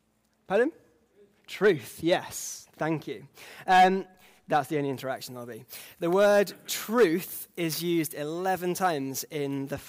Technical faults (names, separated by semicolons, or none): pre-emphasis left on